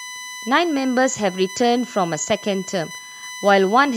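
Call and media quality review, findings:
USB whine throughout: fixed tone at 1 kHz, strongest harmonic 2 kHz, roughly 20 dB under the speech. Likely 1 ms bus frame current leaking via power/ground.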